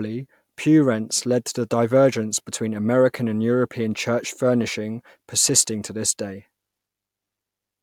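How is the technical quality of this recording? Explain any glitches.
No technical faults are audible.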